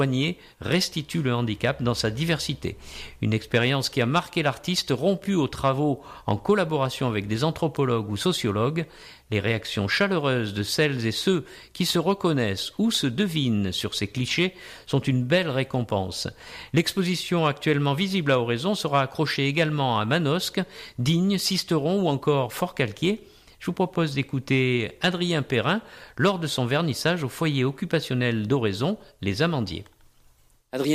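Nothing technical goes wrong anywhere in this recording, so there's no fault to point to and no time worth flagging.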